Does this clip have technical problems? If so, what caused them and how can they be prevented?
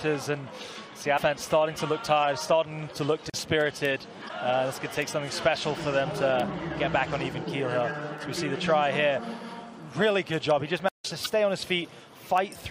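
Yes. Damaged data in a compressed stream causes brief glitches at 1.14–1.19 s, 4.25–4.30 s and 11.23–11.27 s. The decoder misreads corrupted frames and resyncs at the next header. Checksummed transfer or storage prevents this.

Blocks of digital silence cut the audio out for 40 ms at 3.30 s and 160 ms at 10.89–11.05 s. The output buffer likely went unfilled, so the sound stops and returns with no fade, leaving a short hole rather than a squawk. Larger buffers or higher playback-thread priority prevent it.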